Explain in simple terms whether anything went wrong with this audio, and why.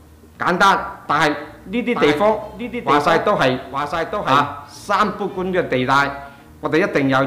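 From about 1.94 s to 4.44 s, everything is heard twice: a second copy of the same sound trails roughly a second behind, only a little quieter than the first, with no fading tail. It cuts in and out abruptly at those two points. This is a doubled audio track. The likely cause is the same sound being captured again through a slower route, or an edit that left two copies stacked out of step.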